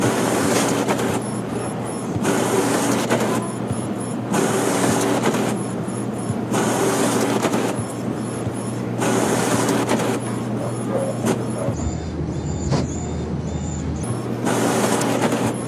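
From 11.74 to 14.03 s the audio drops into slow motion, about a third slower and roughly 7 semitones lower, speed and pitch falling together. That's a wrong sample rate: a two-thirds ratio that fits 48 kHz material played back at 32 kHz without conversion.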